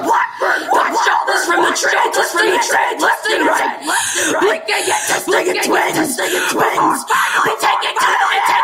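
Throughout the speech, a doubled audio track is audible: a second, full-band copy runs about a second behind the original and a few decibels quieter. It is likely caused by the signal being captured twice, once through a slower path. Unlike an acoustic echo or reverb, the copy has no decay tail, no room colouring and no repeated reflections. It is a single clean duplicate at a fixed offset, so phrases overlap their own delayed repeat.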